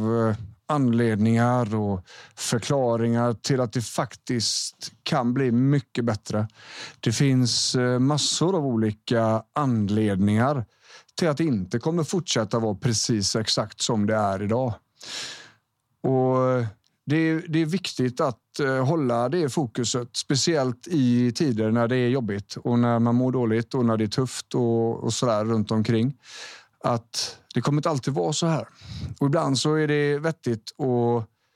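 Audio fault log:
No faults can be heard in the speech throughout.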